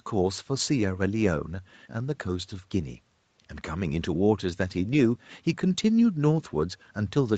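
No technical faults can be heard in this speech recording. It has passed through a call path whose codec leaves nothing above about 8 kHz, which fits a wideband Opus setting, and the microphone processing trims away the lowest bass as expected.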